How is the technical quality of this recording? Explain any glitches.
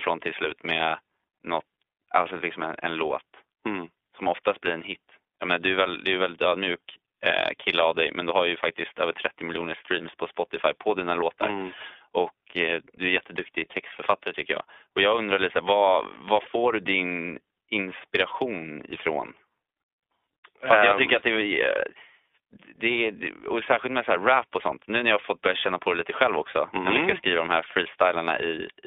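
The recording has passed through an iLBC codec for its full length, with plainly audible damage. The speech was squeezed into a narrowband channel of roughly 300 Hz to 3.6 kHz, and each 20 ms frame's excitation was coded independently, consistent with the 15.2 kbps mode. The result is muffled, telephone-like speech that sounds slightly rough and synthetic.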